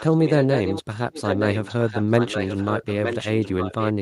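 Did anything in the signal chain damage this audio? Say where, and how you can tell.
Yes. An echo leak, most likely from the call-processing stage, where a far-end loudspeaker's echo canceller let sound through. A copy of the speech returns about 0.92 s late, around 5 dB down from 0.0 to 0.83 s and 10 dB down from 1.12 s onward. Reverb would smear into a decaying tail; this is a distinct repeat at a fixed delay.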